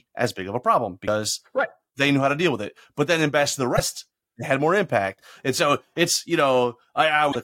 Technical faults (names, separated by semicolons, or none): damaged data in a compressed stream